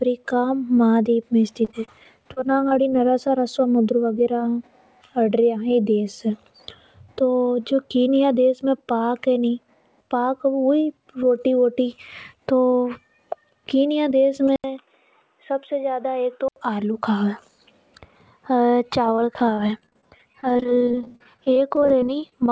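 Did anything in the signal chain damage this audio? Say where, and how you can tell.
Yes, at two stages. The first is the network: repeated packet loss (robotic sound) from 1.65 to 2.93 s, and again, more heavily, from 19.05 to 22.32 s. The first stretch has ten short gaps, the longest 29 ms, adding up to about 160 ms missing, so 12% of that span is concealment. The second has 51 gaps up to 40 ms long, about 700 ms missing, and 22% concealed. Each hole is filled by extending the previous sound, which gives the choppy texture. Coding noise from the G.722 call path would be steady, with its 8 kHz top edge present throughout. This damage instead comes and goes in bursts.

The second stage is capture. From 14.56 to 16.56 s an 80 ms silence is followed by sound that stops at 3.8 kHz, drops by about 5 dB and carries a new noise floor roughly 45 dB down. The cause is likely an input switched to a poorer device, such as a headset call profile. 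A codec limit would hold the band at 8 kHz for the whole clip. Here the narrowing arrives abruptly, together with the gap and the change in level and noise.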